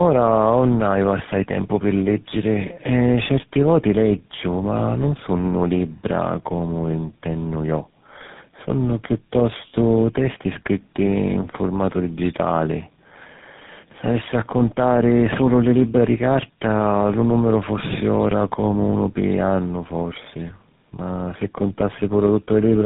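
Tandem speech coding runs through the whole speech clip. The call was decoded and re-encoded at several network borders, so each low-rate speech coder worked on the already damaged output of the one before. The sound fits four such coders in a row, ending in GSM full rate. Nothing is left above 3.8 kHz, and the speech comes through rough, muffled and warbly, worse than any single coder would leave it.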